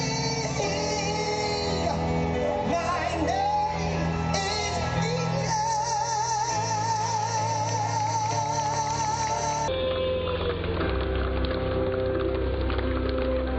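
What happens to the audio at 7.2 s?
Nothing goes wrong at 7.2 s; the audio runs through that moment intact, with no dropout, click, glitch or other fault.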